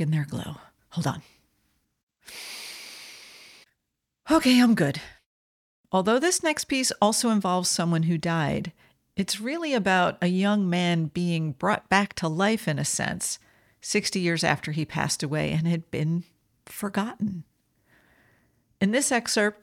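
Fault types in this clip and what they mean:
Nothing here calls for a fault entry; the speech comes across without any technical problems to point out.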